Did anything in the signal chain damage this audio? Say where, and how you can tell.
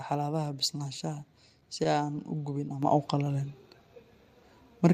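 Yes. On the network side, scattered short gaps run from 1.49 to 2.71 s, where about seven brief losses, the longest near 15 ms, were patched by extending the preceding sound. They are heard as small ticks and smears, and on a spectrogram as short stretched, repeated slivers.

Call processing stepped the microphone volume up at 2.83 s, just before "u qallalin". The software raised the input gain by about 8 dB in one move, so voice and background jump together. The waveform envelope shows a clean, sudden step in height.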